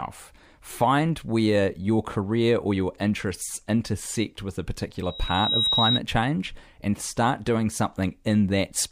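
Speech, with loudspeaker feedback squeal from 5.03 to 6.00 s, after "interests intersect with a": a 3.8 kHz tone swells over about half a second to around 5 dB above the voice, a bright horizontal line on a spectrogram.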